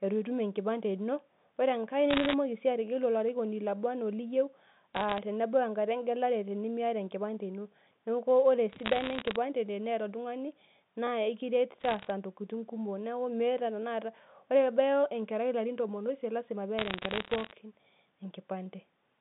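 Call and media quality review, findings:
Bit errors on the digital phone line: bursts of sharp ticks and crackle over the speech at 2.10–2.34 s (just before "si ategelu"), 4.95–5.18 s, 8.69–9.36 s, 11.80–12.10 s and 16.78–17.51 s. The first burst is the densest, roughly one bit in a hundred flipped, and the others are lighter. The G.711 mu-law path carries the damage: each flipped bit corrupts one sample, and a hit on a high-order bit, or on the sign of a loud sample, produces a click.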